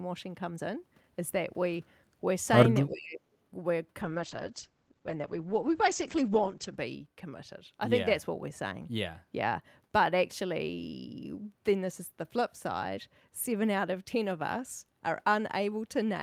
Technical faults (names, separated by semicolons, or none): speech suppressed in double talk; call bitrate drop